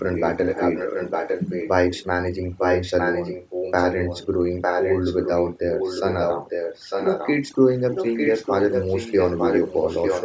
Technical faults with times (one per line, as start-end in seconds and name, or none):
0.00-10.24 overdone noise removal
0.15-2.05 echo leak
2.57-4.26 echo leak
4.61-7.41 echo leak
7.93-10.24 echo leak